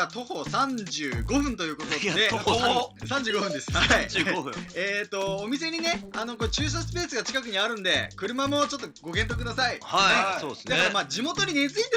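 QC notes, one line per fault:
Throughout: resampler restarted on every block. A buzz at 100 Hz rides on the signal, from edge errors where each 10 ms block was converted from 16 kHz to 48 kHz separately.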